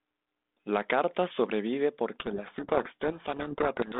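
Speech carried over a telephone-band G.726 link at 32 kbit/s. It passes roughly 200 Hz to 3.6 kHz with only light coding roughness. From 2.2 s to the end, a codec payload misread buries the speech in harsh distortion. The decoder unpacks each G.726 code word with its bits in the wrong order, so the decoded differences come out wrong. Unlike the level-following rasp of a low G.726 bitrate, this distortion switches on abruptly and persists to the end.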